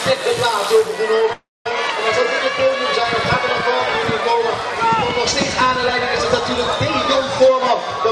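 At 1.33 s the sound stops moving forward and turns into a smeared buzz that fades out. Most of that stretch, about 220 ms, is silence. At 1.66 s the audio picks up exactly where it left off, so nothing is lost. A gap of roughly a third of a second has been inserted instead. This is a call audio freeze, likely caused by delayed packets leaving the jitter buffer empty while the receiver stretched the last sound to fill the wait.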